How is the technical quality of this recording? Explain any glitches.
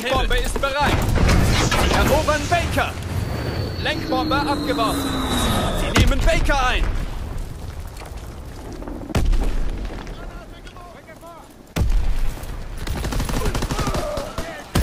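Nothing stood out on listening; there are no glitches to explain in this recording.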